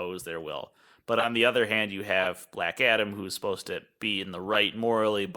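Corrupt frames were decoded at 1.19–1.26 s after "their will but", 2.20–2.26 s after "the other hand you", and 4.53–4.56 s after "supposed to be in". Flipped bits put energy at wrong frequencies. Each sounds like a brief chirp or noise burst. The first is loudest.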